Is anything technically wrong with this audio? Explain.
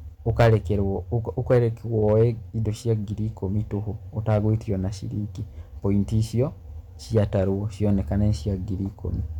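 Yes. The speech runs into hard clipping five times: a stage in the chain receives more level than it can pass, so the peaks are sliced flat. Those squared-off tops add high harmonics, heard as a harsh crackle on the loudest syllables. The worst is at 0.30 to 0.55 s, driven about 9 dB over. Lighter bursts follow at 1.51 to 1.58 s (about 3 dB), 2.03 to 2.24 s just before "indo cia ngiri" (about 2 dB), 4.29 to 4.49 s just before "ona ciringi point icio" (about 4 dB), and 7.17 to 7.39 s (about 3 dB).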